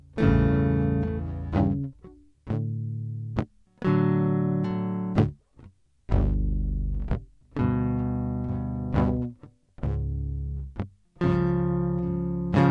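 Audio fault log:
Throughout, wrong sample rate. The music runs at half speed and sits a full octave, 12 semitones, too low. Pitch and tempo fall together because the samples are not converted. The halving fits 48 kHz material played back at 24 kHz.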